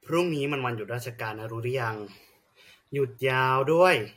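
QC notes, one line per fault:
Throughout: transcoding between lossy codecs. The speech carries artefacts of two different characters heard together, and nothing above 16.7 kHz, likely from an MP3 around 63 kbit/s re-encoded as AAC-LC near 64 kbit/s, stacking both codecs' damage.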